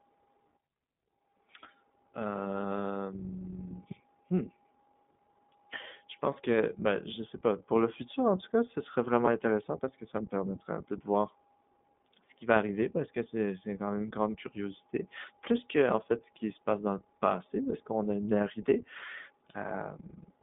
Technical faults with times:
0.00-20.42 iLBC codec

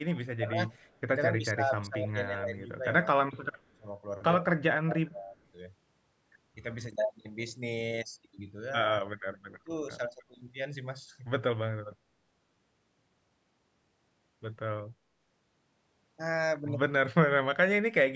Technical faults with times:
0.11-0.75 speech suppressed in double talk
0.80-0.99 echo leak
1.37-2.85 speech suppressed in double talk
3.32-3.86 speech suppressed in double talk
4.84-5.37 speech suppressed in double talk
9.01-9.05 speech suppressed in double talk
9.52-10.32 speech suppressed in double talk
17.43-17.98 speech suppressed in double talk

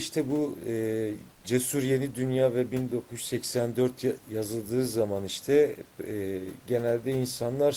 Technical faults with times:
1.35-1.43 comfort noise in place of the background

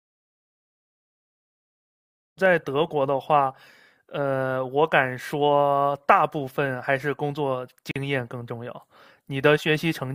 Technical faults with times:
7.91-7.96 gap at a join of encoded pieces

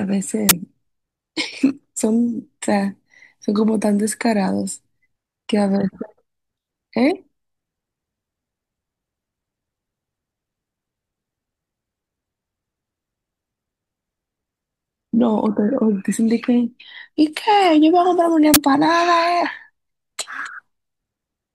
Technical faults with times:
0.49-0.51 uninitialised buffer
18.54-18.56 uninitialised buffer

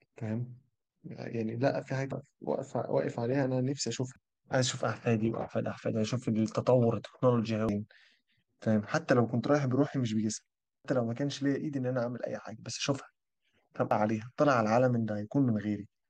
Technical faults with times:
2.11 damaged data in a compressed stream
4.16 damaged data in a compressed stream
7.69 damaged data in a compressed stream
10.85 damaged data in a compressed stream
13.91 damaged data in a compressed stream

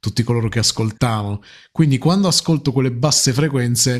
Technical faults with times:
none

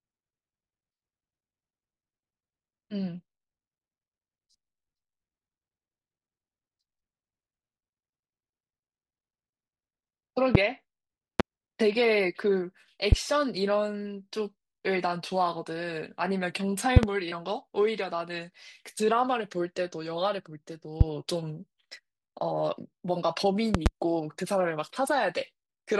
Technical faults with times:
10.55-10.58 loud pop
11.40-11.42 loud pop
13.12-13.15 loud pop
16.97-17.06 loud pop
21.01-21.03 loud pop
23.75-23.89 loud pop

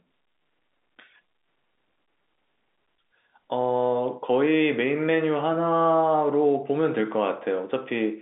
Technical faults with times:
none

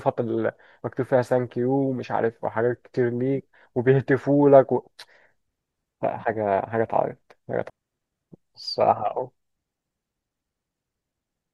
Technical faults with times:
7.69 stream segment skipped

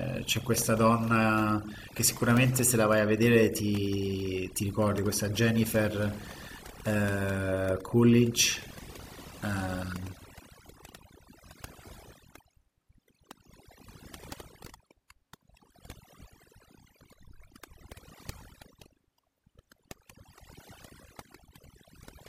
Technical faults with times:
0.00-22.29 overdone noise removal

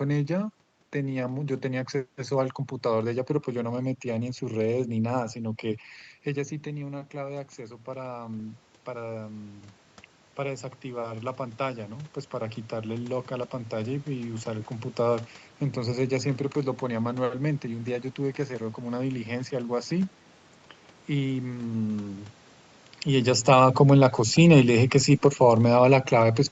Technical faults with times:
23.35-26.51 automatic gain falling

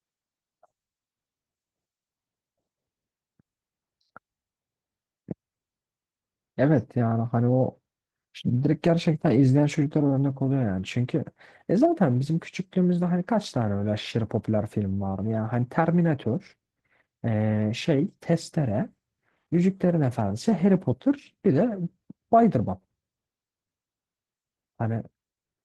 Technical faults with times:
0.00-25.64 Opus voice compression

